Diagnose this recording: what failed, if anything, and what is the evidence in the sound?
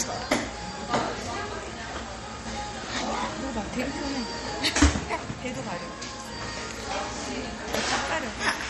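The codec stage is where this one went wrong, and it runs the whole way through. There's nothing above 15 kHz, a hard treble ceiling, and the texture is plainly watery and swirly, with faint detail flickering in and out as weak frequency lines get dropped frame to frame. That points to heavy MP3 compression, likely at a low bitrate, something in the region of 48 kbps, where the encoder runs short of bits and sacrifices the top end and quiet detail first.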